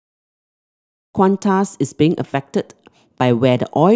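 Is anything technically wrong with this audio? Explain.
No, nothing technically wrong can be heard in this speech clip. The level rises in a smooth fade-in that begins at about one second and is complete by 1.18 s, with no click or hard edge.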